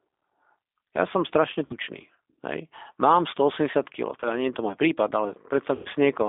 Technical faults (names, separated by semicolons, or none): G.729 codec; VoIP packet loss concealed by the speech codec